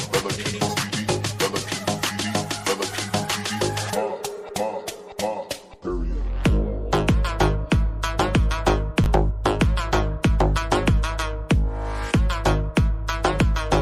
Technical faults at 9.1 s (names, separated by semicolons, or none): chunks out of order